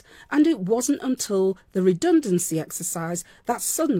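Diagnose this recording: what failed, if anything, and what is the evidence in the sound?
Nothing in the chain appears to have failed: the speech signal is continuous and steady in level, with no audible breaks, distortion or timing disturbance at any point.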